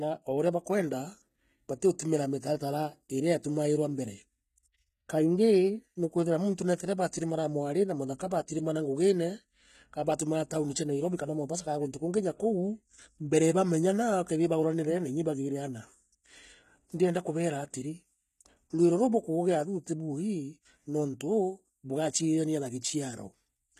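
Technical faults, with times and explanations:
Throughout, HE-AAC compression: the speech keeps its brightness up to about 14.9 kHz, yet the treble sounds gritty and metallic, and s sounds come out lispy. The likely cause is a codec coding only the lower spectrum at a low rate, around 20 kbps, and rebuilding the top by copying lower bands upward, so upper harmonics fail to line up with the ones below. A plain low-pass would instead leave the top dull rather than synthetic.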